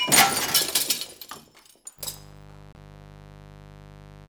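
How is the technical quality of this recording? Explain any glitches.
The recording has two faults: a buzz that sets in partway through and stays to the end, and a brief corrupted patch shortly after it begins.

Mains buzz runs from 1.96 s to the end. Sharp interference spikes arriving twice per 50 Hz cycle create a raspy, steady drone about 25 dB below the wanted sound. A spectrogram shows evenly spaced horizontal lines at 50 Hz multiples stretching into the kilohertz range, and the waveform carries a fine repeating comb.

A broken MP3 bit reservoir is the likely cause of the glitch from 2.73 to 2.77 s. The sound skips forward and the following 48 ms come out as a chirp, a burst of noise or a short hole, a span of two 24 ms frames. Each damaged frame looked back for borrowed data and decoded bytes from the wrong frame instead. A spectrogram shows a smeared, broadband smudge or gap breaking the texture, and the waveform shows an abrupt discontinuity.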